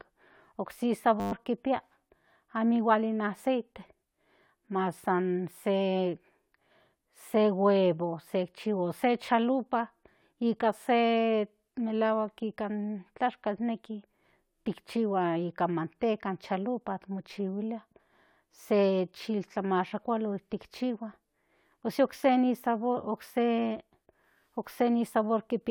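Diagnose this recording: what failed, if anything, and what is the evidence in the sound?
A system hang loop at the driver or buffer stage. From 1.2 to 1.32 s the speech stops and a steady buzz takes its place. It is one 10 ms slice of audio, repeated exactly twelve times. That gives a 100 Hz tone at the loop rate. The driver stalled, but the hardware kept replaying the same short ring buffer. About a tenth of a second of real audio is lost behind the buzz.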